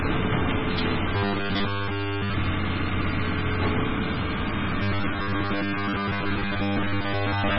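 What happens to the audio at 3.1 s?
At 3.1 s the sound carries heavy MP3 compression damage, which runs through the whole clip rather than starting there. Nothing is present above 5.6 kHz, so the top end is cut flat. The likely cause is an encoder starved of bits, dropping the treble and zeroing weak frequency lines that flicker on and off between frames. That gives a watery, swirling texture with smeared attacks, which fits a very low bitrate of around 16 kbps.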